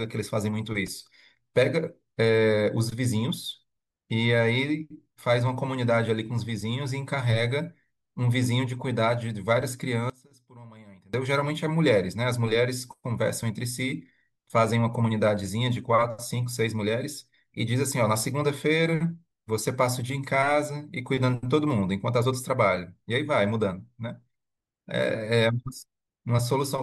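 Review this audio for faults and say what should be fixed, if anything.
From 10.10 to 11.14 s, one stereo channel was likely flipped in polarity, a one channel inverted fault, so the two sides carried the same speech in opposite phase. When the channels are summed to mono, that shared, centred speech cancels and the level falls by about 23 dB for just over a second. What remains is only the faint difference between the channels. Check and correct channel polarity at every patch, cable and processing stage before the stereo signal reaches the mix bus.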